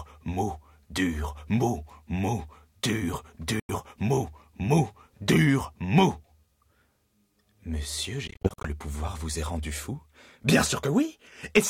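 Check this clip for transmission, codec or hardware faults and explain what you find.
Two short breaks in the audio: at 3.60 to 3.70 s the sound cuts to silence for about 90 ms, and from 8.28 to 8.69 s it stutters through several small gaps, the longest about 46 ms, then carries on as if it had kept playing. This is likely a Bluetooth dropout, where late packets are discarded and the output goes silent until good ones arrive.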